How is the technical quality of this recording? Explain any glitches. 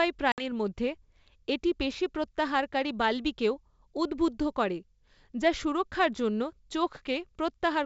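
One glitch, near the start between 0.32 and 0.43 s, is packet loss on an ADPCM call carried over G.722 wideband coding, which itself adds faint or no damage. About 60 ms, roughly three packets, went missing and was replaced by silence, cutting a hard-edged gap into the speech. ADPCM decoding depends on the predictor and step size it has built up from earlier samples. After the gap, these no longer match the sender's, so the speech returns slightly distorted, settling within a few tens of milliseconds.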